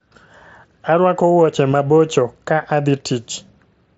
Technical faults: concealed Bluetooth headset packet loss

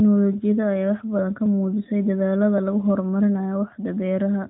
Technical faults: clock drift buffer slips

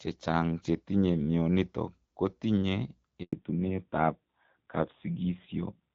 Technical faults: handover gap; fallback to narrowband

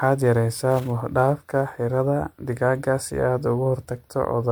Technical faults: generation loss; sample clock jitter

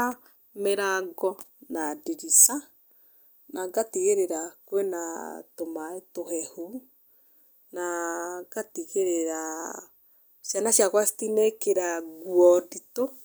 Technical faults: none

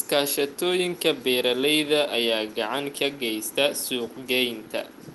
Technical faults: none

